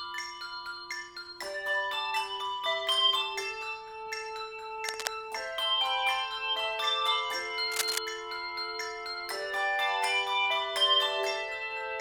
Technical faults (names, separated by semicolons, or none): cable scratch noise